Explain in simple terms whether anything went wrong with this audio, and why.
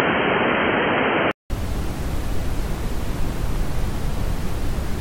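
From 0 to 1.5 s the sound is dull and boxy, with nothing above 3.2 kHz, then a brief gap at the switch. This is likely an input switched to a poorer device.

Between 2.66 and 3.96 s there is a train of clicks: about ten ticks per second, unevenly spaced, as loud as the sound, likely from electrical interference.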